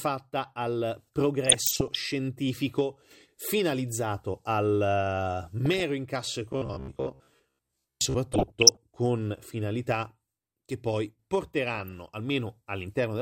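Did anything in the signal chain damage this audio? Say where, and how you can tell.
Yes. There's DAB burbling at 1.45–1.97 s, 5.66–5.80 s, 8.32–8.77 s and 11.68–11.98 s, short blips of noise in single sub-bands over the speech. That's the codec stage: a small fraction of bit errors slipped past error correction, so individual MP2 sub-bands jump in level frame by frame.

From 6.53 to 8.16 s the speech turns into a rigid robotic sound from repeated short buffers, locked to a 66.8 Hz buzz. The likely cause is the buffer stage starving and replaying roughly 15 ms chunks, so about half the audio is repeats instead of new material.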